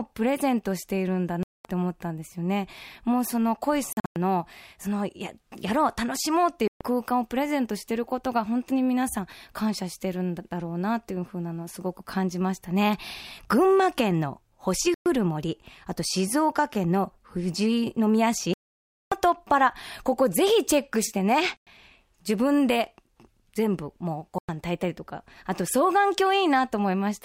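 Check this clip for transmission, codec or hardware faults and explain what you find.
The speech is broken by seven gaps, most likely Bluetooth dropouts, at 1.43 s (0.22 s), 3.93 s (scattered over 0.23 s, longest 0.1 s), 6.68 s (0.13 s), 14.94 s (0.12 s), 18.54 s (0.58 s), 21.57 s (0.1 s) and 24.38 s (0.1 s). Late packets are discarded, so the sound stops abruptly and resumes as if it had run on. Waveform and spectrogram show clean, sharp-edged blank columns.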